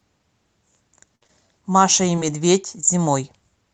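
A burst of packet loss at 1.15 to 1.23 s removes about 60 ms of speech. The receiver stretches the last sound into a fading buzz or hiss, then resumes further on.

Short concealed packet loss follows immediately at 1.23 to 1.27 s and 1.27 to 1.31 s, and again at 2.16 to 2.19 s and 2.19 to 2.23 s. Each drops about 20 ms, patched from the preceding sound, heard as a brief smear or wobble.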